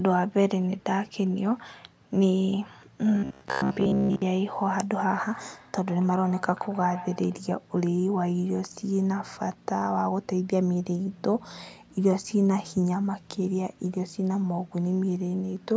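From 3.15 to 4.22 s the speech turns into a rigid, metallic buzz at 66.8 Hz. The likely cause is robotic sound from repeated short buffers, with roughly 15 ms replayed.

From 5.31 to 7.45 s there is feedback echo between two devices. Speech returns about every 150 ms, thin and ringing, peaking about 16 dB below the speech.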